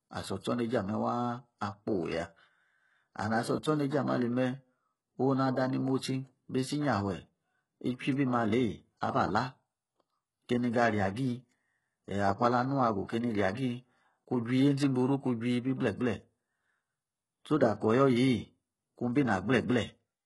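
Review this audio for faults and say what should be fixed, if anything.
HE-AAC compression runs throughout the speech, with nothing above 11.5 kHz. The treble is likely rebuilt from copied lower bands rather than coded, so s sounds come out gritty and lispy, and the heavy damage fits a very low bitrate near 12 kbps. To prevent it, encode at a higher bitrate or with a full-band codec such as plain AAC-LC.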